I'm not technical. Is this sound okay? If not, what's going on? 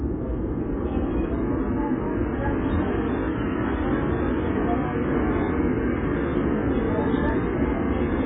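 No. Throughout, the sound is dull and smeared, with no treble above 3.7 kHz. This is likely heavy AAC compression, squeezing the audio into too little data.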